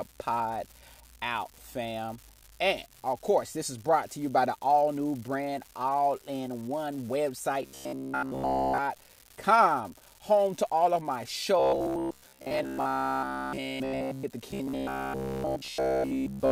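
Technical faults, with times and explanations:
throughout: unreliable data bit. A steady crackle and fizz sits under the speech and carries on through the pauses, where nothing else masks it. One data line is marginal, so its bit flips in a random share of samples; every flip adds a spike of the same height, and the scattered spikes blend into constant grainy noise rather than separate clicks.
7.63–8.78 s, 11.60–14.25 s, 14.51–16.52 s: robotic sound from repeated short buffers. Right after "brand all in one", and again after "to all of my", the speech turns into a rigid, metallic buzz at 66.7 Hz that still loosely tracks the words. The first and last spans are buzz throughout, the middle one for most of its length, and the last runs to the end of the clip. The likely cause is audio arriving too seldom, so the software loops the last 15 ms while real audio is skipped, imposing that fixed pitch.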